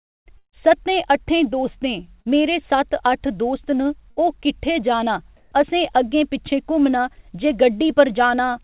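At 0.38 to 0.55 s a burst of packet loss removes about 150 ms of audio. The receiver stretches the last sound to cover the hole, then fades it, so roughly 90 ms of that span sinks to near silence before the speech picks up further along with a chunk missing. The audible fade into quiet and the jump in continuity set a burst apart from a brief concealed drop.

At 2.22 to 2.28 s a short concealed packet loss covers about 30 ms. The decoder continues the preceding sound and blends back into the real signal, leaving only a quick smear or wobble with no fade to silence and no obvious skip. At 4.11 to 4.20 s a second, shorter burst of packet loss takes out about 60 ms. It is long enough that the filled sound thins before the speech resumes with a small piece gone.

From 5.37 to 5.52 s, about 150 ms of the pause carries a flat, even hiss in place of the room's textured background. The background sits about 31 dB below the loudest speech, and the change in level is only about 1 dB. 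The likely cause is comfort noise standing in for the background while transmission paused. No speech is lost here, unlike a dropout. Only the background's texture changes. Throughout, nothing reaches above 4 kHz, which fits a narrowband G.711 mu-law call path.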